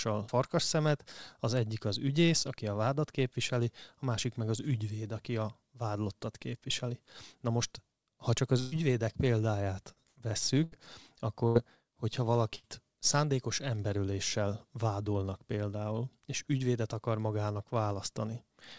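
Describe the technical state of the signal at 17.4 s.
At 17.4 s the speech is intact, carried cleanly through the call path with its G.722 coding, which leaves nothing above 8 kHz.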